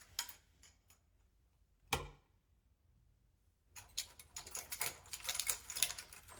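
No technical faults can be heard anywhere in these sounds. Nothing in the recording calls for a timestamp or a comment on how it was captured or processed.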